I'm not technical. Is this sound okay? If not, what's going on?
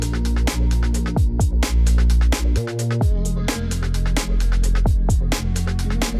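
Yes, nothing in the signal points to a technical problem: there are no dropouts, glitches or distortion anywhere in it.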